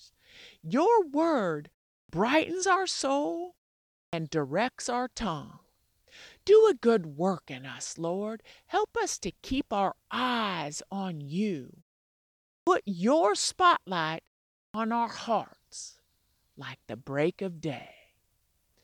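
At 2.03, 4.06, 12.6 and 14.68 s, speech resumes with a clipped start after a pause. The output path sleeps during each gap of 0.37 to 0.86 s. It wakes late, swallowing 62 to 69 ms. Each word starts abruptly, without its opening sounds.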